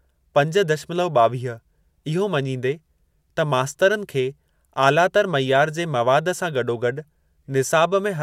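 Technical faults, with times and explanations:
No technical faults can be heard anywhere in this speech.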